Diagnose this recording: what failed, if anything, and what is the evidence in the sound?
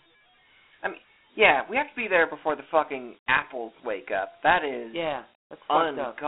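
The codec stage failed: Dialogic VOX ADPCM runs throughout. Speech sits in a 250 Hz to 3.5 kHz line band with nothing above 3.9 kHz, and a gritty hiss rides on every syllable, fitting 4-bit 32 kbps coding. Plain band-limiting wouldn't add that speech-following grit.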